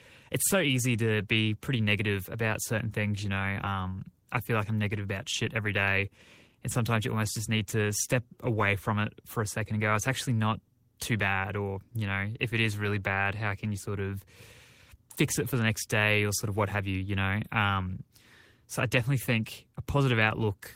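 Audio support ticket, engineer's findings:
No audible faults found.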